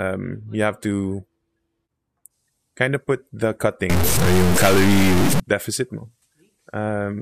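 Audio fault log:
3.90–5.40 s, stuck bit: after "kind of put the", harsh buzzy distortion with an error step of about -10 dBFS on about half the samples (likely a stuck high-order bit) that also fills quiet gaps, unlike clipping, until "deficit mo".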